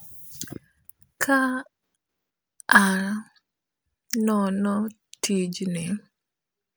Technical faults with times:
none

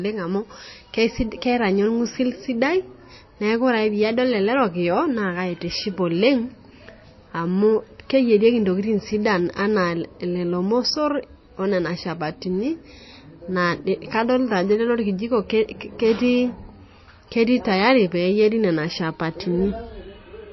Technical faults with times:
0.00-20.52 MP3 compression

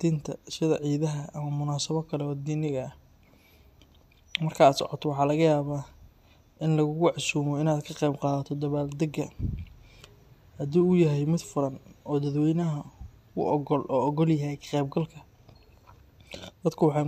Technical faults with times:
0.12-17.07 clock slip clicks

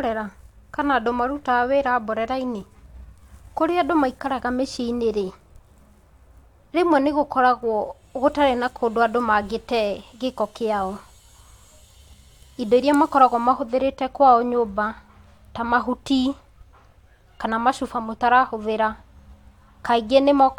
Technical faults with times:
none

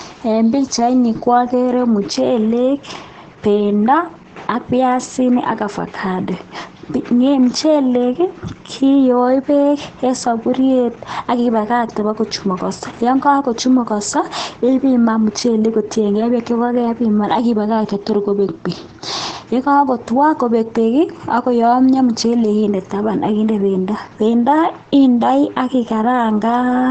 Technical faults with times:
0.00-26.91 Opus voice compression

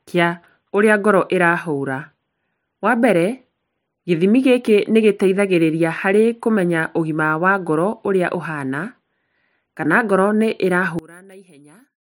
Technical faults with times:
10.99-12.18 one channel inverted

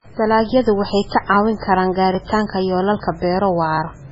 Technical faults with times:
0.00-4.11 MP3 compression
0.53-3.77 clock drift buffer slips

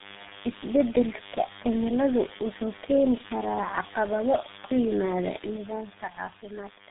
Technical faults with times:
0.00-6.90 DECT cordless phone buzz
0.00-6.90 tandem speech coding

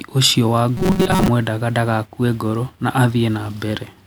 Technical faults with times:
0.77-1.29 robotic sound from repeated short buffers

